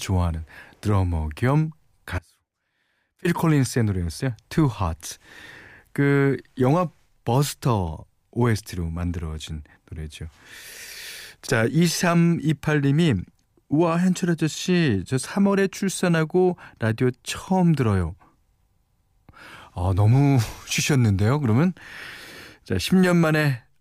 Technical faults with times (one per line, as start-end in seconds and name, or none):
2.19-3.25 audio dropout to a faint residue